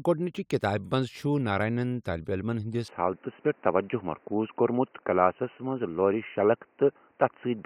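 At 2.88 s the speech abruptly narrows, with nothing above 3 kHz, and stays dull and boxy to the end. The level shifts by around 5 dB and a new faint noise floor appears, so the input likely switched to a poorer device rather than being simply filtered.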